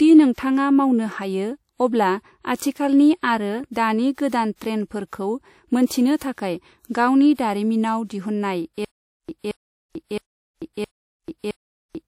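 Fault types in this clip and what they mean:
Low-bitrate audio saved at a high bitrate: The speech was likely encoded first by a low-bitrate codec and then re-encoded as a high-bitrate MP3, which enlarges the file without restoring what the first pass discarded. Nothing is present above 16.4 kHz throughout, and the artefacts of the earlier encoding carry through unchanged. That fits a 64 kbit/s WMA source later saved as 320 kbit/s MP3, with the second encode adding almost nothing.
Stutter with silent gaps: The stream or player likely stalled from 8.85 s onward, and on each retry it replayed its last buffered fragment before running dry. The result is a burst of about 0.23 s of speech repeating five times, each followed by roughly 0.44 s of digital silence, so the pattern cycles every 0.67 s until the clip ends. Whatever speech should have filled those final seconds is gone, replaced by the same chopped fragment.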